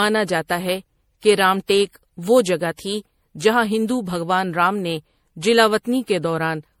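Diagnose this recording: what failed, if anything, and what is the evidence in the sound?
Codec stage, throughout: swirly, hollow speech with blurred attacks, likely generation loss from repeated MP3 re-encoding. The spectrogram shows accumulated spectral holes and smeared onsets.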